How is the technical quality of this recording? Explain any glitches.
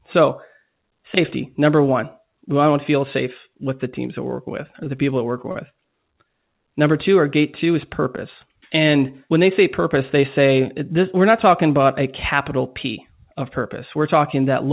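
The recording comes through a narrowband call path cut off at 4 kHz, with three short stalls from a late packet bunched just after 4.8 s. At 4.84, 4.96 and 5.51 s, after "we're working with or", "working with or the" and "people that we're working", the jitter buffer ran dry, so the last sound was held for roughly 19, 15 and 32 ms before playback resumed. You'll hear brief drags with a slight buzz or dip.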